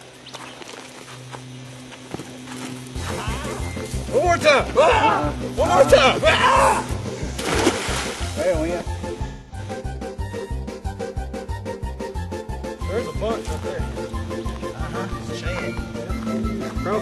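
AAC frame loss with concealment at 1.63 to 1.69 s and 9.27 to 9.59 s: lost frames are rebuilt from the last good spectrum, leaving smeared, phasey patches rather than clean silent dropouts.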